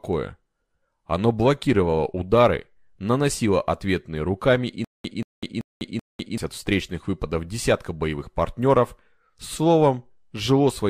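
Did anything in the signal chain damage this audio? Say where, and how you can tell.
Yes. From 4.85 to 6.38 s, after "наносило ответные руками и", one 184 ms fragment repeats four times, each followed by 199 ms of digital silence. This stutter with silent gaps likely comes from a stalled playback or stream replaying its last fragment at each retry, losing the audio due there.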